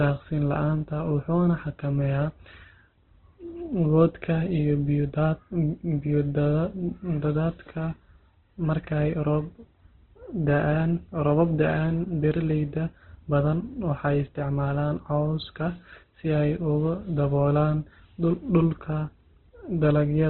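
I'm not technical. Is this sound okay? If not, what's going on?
No. The speech was likely squeezed hard by Opus compression, so from start to finish nothing above 4.4 kHz survives, leaving it muffled, rough and grainy.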